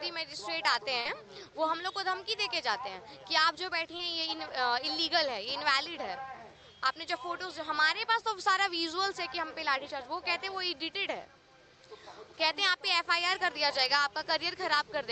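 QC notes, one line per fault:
1.01–1.07 s and 3.97–4.01 s, short concealed packet loss: about 40 ms and then 20 ms of audio arrived too late to decode, so the receiver extended the preceding sound to cover each gap before crossfading back. This is heard as a brief smear or wobble. On a spectrogram each gap shows as a short patch of frozen, blurred harmonics or noise, with content above 8 kHz already absent due to the call codec. On the waveform each gap shows as a run of near-identical repeated cycles or shaped noise.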